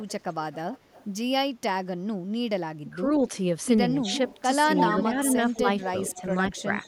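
A far-end echo canceller likely let loudspeaker pickup through, so this speech carries an echo leak: a copy trailing by 192 ms, faint from 0.0 to 1.05 s. Both talkers then likely overlapped and the canceller cut both, causing speech suppressed in double talk from 2.83 to 3.21 s, where the level falls by about 20 dB over roughly 0.2 s. A brief dip of about 5 dB follows at 4.01 to 4.08 s. The echo returns louder, at about 10 dB below the speech from 4.06 to 4.42 s and about 5 dB below from 4.76 to 6.22 s. The speech dips slightly again from 6.15 to 6.66 s, and the faint echo lingers from 6.54 s to the end.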